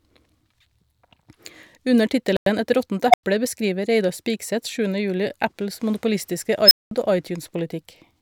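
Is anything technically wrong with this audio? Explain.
Yes, there are two kinds of fault in this speech clip.

From 2.37 to 2.46 s the audio drops to silence for 97 ms and then picks straight back up. That looks like a Bluetooth stall, most likely radio interference delaying packets so the headphones' playback buffer emptied and output paused until the retransmitted data arrived. It's a clean gap rather than a crackle, and the sound resumes as though someone briefly hit pause.

The other two are an unstable filter. At 3.10 to 3.23 s a tone around 700 Hz swells over about 35 ms, clips, then cuts to 96 ms of silence. At 6.66 to 6.91 s it happens again with a much higher squeal near 5 kHz, building over about 52 ms, followed by roughly 200 ms of silence. A recursive filter with bad coefficients is feeding its own output back until it runs away, overflows, and goes dead until it resets.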